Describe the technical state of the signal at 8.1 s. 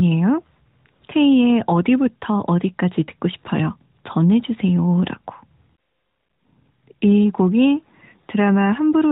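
At 8.1 s the speech is intact, carrying only the light, band-limited character of the AMR narrowband mobile codec path it passes through.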